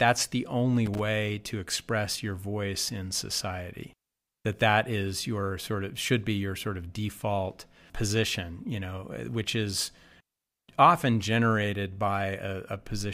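Right after "the only", at 0.86 s, there's a short burst of loose connector crackle that lasts until about 0.99 s, so roughly 130 ms, before "to express your voice". It's that irregular scratchy chatter you get when a worn or dirty contact shifts and keeps making and breaking. The speech gets chopped into fragments.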